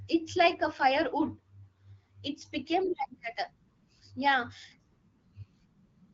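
No technical faults can be heard in the speech, which carries the character of AMR wideband (HD Voice) coding at 12.65 kbit/s, a rate at which the codec leaves only light marks on the signal.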